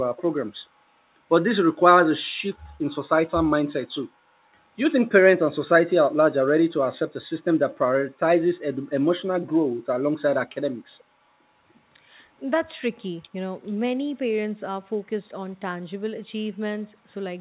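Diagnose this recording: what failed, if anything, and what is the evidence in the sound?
A faint copy of the speech, trailing by 434 ms, surfaces from 0.16 to 0.22 s, likely an echo leak where the far-end echo canceller missed loudspeaker pickup.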